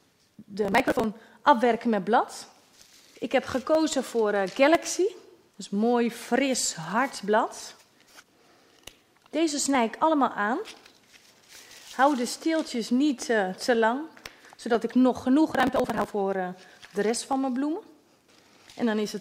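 Processor overload crackle hits from 0.63 to 1.04 s and again from 15.52 to 16.12 s: buffers of about 10 ms miss their deadlines and get skipped, leaving gritty tearing.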